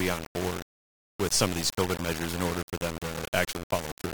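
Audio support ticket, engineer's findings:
Gritty distortion that follows the speech throughout. Likely low bit depth without dither, consistent with 4-bit rounding. Waveform shows visible staircase steps. Spectrogram shows broadband haze tracking speech.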